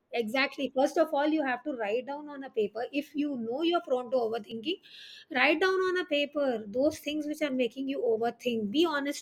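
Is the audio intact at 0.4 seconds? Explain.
Yes, the audio is intact at 0.4 seconds, with no fault to be heard at that moment.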